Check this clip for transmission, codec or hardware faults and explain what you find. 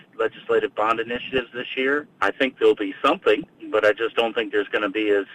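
There's DAB burbling in two bursts, from 1.08 to 1.52 s and from 3.43 to 3.80 s. Bit errors, a fraction of a percent, slip past error correction into the MP2 data, so individual sub-bands jump in level frame by frame. You hear bubbling, chirpy squelches.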